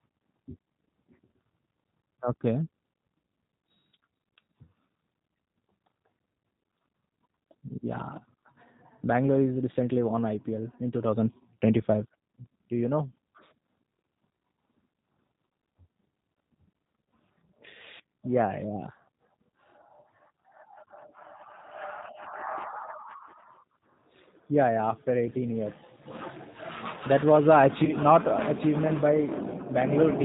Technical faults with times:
0.00-30.24 G.729 codec
27.85-27.95 VoIP packet loss concealed by the speech codec

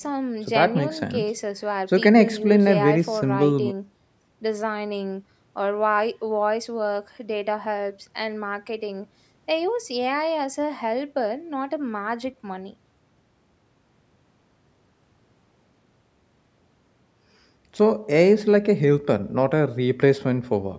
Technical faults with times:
none

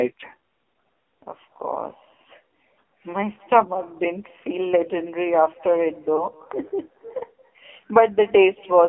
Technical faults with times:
0.00-8.88 echo with no canceller
0.00-8.88 AMR narrowband mobile codec
6.16-6.26 lost AMR speech frames

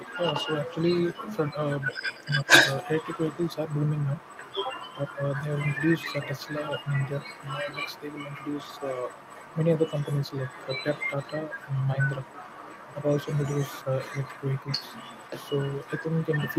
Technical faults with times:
0.00-16.59 other side's voice leaking through
2.44-2.53 speech suppressed in double talk
7.63-7.67 speech suppressed in double talk

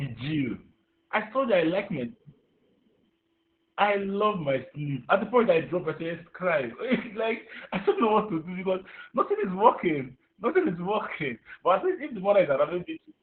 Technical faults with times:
0.00-13.22 Opus voice compression

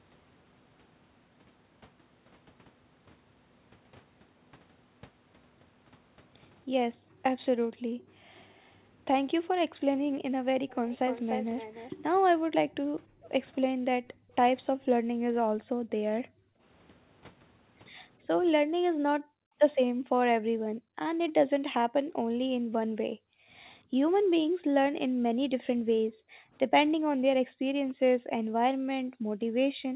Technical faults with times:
6.97-8.32 background gated by the echo canceller
8.54-8.77 echo leak
9.40-10.24 background gated by the echo canceller
10.69-11.95 echo leak
12.37-13.24 background gated by the echo canceller
13.98-16.61 background gated by the echo canceller
18.64-29.96 background gated by the echo canceller

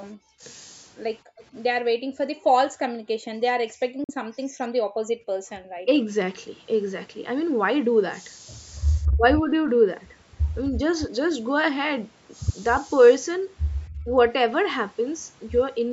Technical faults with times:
0.13-0.41 background gated by the echo canceller
1.23-1.37 background gated by the echo canceller
1.37-1.43 echo leak
1.85-5.49 background gated by the echo canceller
4.04-4.11 Bluetooth dropout
5.83-6.07 speech suppressed in double talk
9.16-9.23 speech suppressed in double talk
14.04-14.11 speech suppressed in double talk

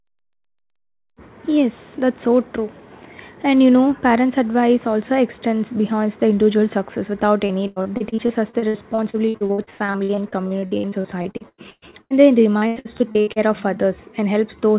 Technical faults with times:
7.46-12.13 repeated packet loss (robotic sound)
12.58-13.39 repeated packet loss (robotic sound)

